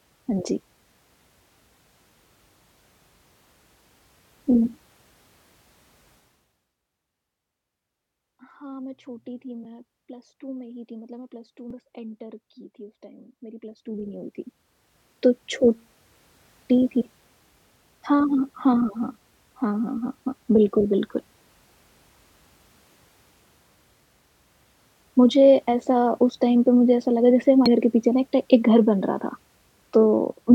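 A speech recording with damaged data in a compressed stream at 11.71 s and again at 27.66 s. Each is a brief glitch where the decoder hits corrupted bytes, loses frame sync and resumes at the next valid header. Between 13.56 and 15.04 s a level move of around 20 dB produces zipper noise. The gain changes in 1 dB steps at about thirty steps per second with no smoothing between them, so each step clicks and the run of clicks rides audibly over the speech as a ticking buzz.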